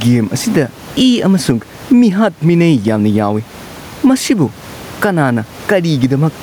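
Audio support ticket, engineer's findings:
Gain pumping, whole clip: gain swing around 15 dB; speech squashed, level flattened. Likely mic preamp gain set far too high, fast limiter/compressor clamping every peak; room noise sits about 32 dB under speech.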